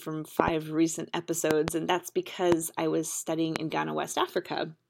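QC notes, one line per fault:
0.40–0.50 s and 1.51–1.70 s: loud pop, twice each. Two sharp clicks about 25 dB above the speech, likely from a switch or plug voltage spike.
2.52–2.54 s and 3.56–3.58 s: loud pop, single, about 20 dB above the speech. The speech carries on underneath, likely from a brief electrical spike.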